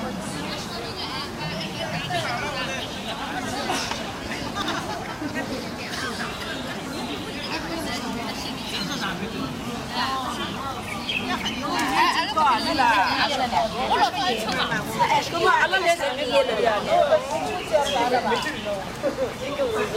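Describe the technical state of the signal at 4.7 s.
At 4.7 s the audio has chunks out of order between 4.62 and 4.74 s: one 60 ms chunk plays a chunk late, after the one that should follow it, creating three hard joins and a brief jumbled moment. Unlike a dropout or repeat, nothing is missing or duplicated.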